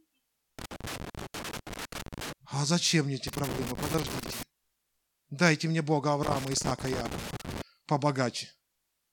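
Loose connector crackle hits three times, 0.59 to 2.33 s, after "зачем мне эти" at 3.28 to 4.43 s, and 6.23 to 7.62 s: a worn contact chopping the speech into scratchy bursts.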